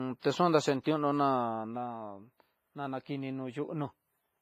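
Low-bitrate audio saved at a high bitrate, present throughout this speech clip: nothing sounds above 15.4 kHz, and the low-rate codec artefacts persist. This likely comes from a low-bitrate WMA encode later re-saved as high-bitrate MP3, which cannot restore the lost detail.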